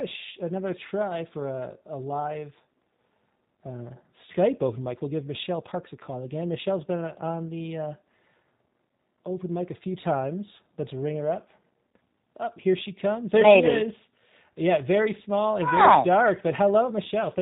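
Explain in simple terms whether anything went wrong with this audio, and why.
Two things went wrong with this speech recording.

The whole clip has passed through the G.729 codec, a low-rate phone-call format. It doesn't store the actual waveform. It keeps a rough model of the vocal tract and pitch plus a few pulses per short frame, and the decoder rebuilds the voice from that. Everything above 4 kHz is gone, so the voice sounds narrow and muffled, with a plainly audible rough, slightly synthetic edge.

At about 4.32 to 4.36 s, just before "open mic", there is a brief glitch from VoIP packet loss concealed by the speech codec. Roughly 20 ms of audio went missing, which fits a single lost packet. The decoder filled the gap by stretching the last sound it had into a short patch that fades. Because each frame builds on the one before, the voice stays weak or distorted for a moment after the gap.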